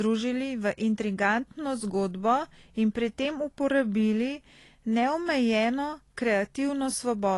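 Speech with AAC compression damage throughout: nothing above 11.5 kHz and fizzy, warbling sibilants that a plain low-pass filter wouldn't cause, likely from AAC-LC at around 32 kbps.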